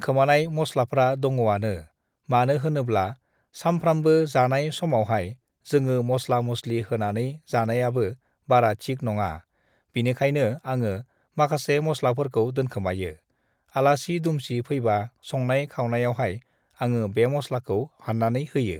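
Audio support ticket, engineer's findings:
No faults found in playback.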